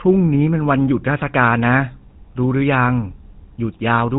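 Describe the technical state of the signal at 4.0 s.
A buzzy, gravelly roughness sits on the speech at 4.0 s, with nothing above 4 kHz. It runs through the whole clip. It's GSM full-rate codec damage, consistent with 13 kbps: the vocal tract is modelled and excited by evenly spaced pulses keeping only every third sample.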